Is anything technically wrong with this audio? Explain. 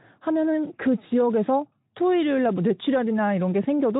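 No, nothing is technically wrong with this audio.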